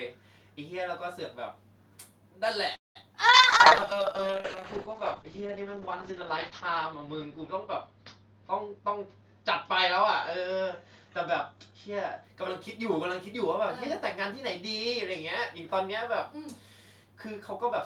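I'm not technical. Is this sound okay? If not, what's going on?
No. The speech has four kinds of problem.

At 2.75 s there is a call audio freeze. The sound stops for about 0.2 s, with a brief fading tail and then near silence until 2.97 s. It then carries on where it left off, so nothing is lost. The likely cause is network packets arriving late, which left the receiver with nothing to play.

From 3.01 to 3.04 s there is short concealed packet loss. A tiny piece of the call never arrived. The phone patched the hole by stretching the sound just before it, so you hear a quick smear or wobble.

From 3.29 to 12.30 s there is a call bitrate drop. The connection got weaker, so the call sent much less detail. The speech becomes rough and muffled, and everything above about 8 kHz is cut. It is at its worst for about 3.2 s, then it recovers.

Inside that stretch there are two jitter buffer speed-ups. 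Audio had piled up, so the phone cut small slices out to catch up. From 8.74 to 9.43 s the speech runs 17% fast, losing roughly 150 ms, and sounds hurried. From 10.04 to 11.06 s it runs 4% fast, losing roughly 50 ms. The pitch stays the same both times.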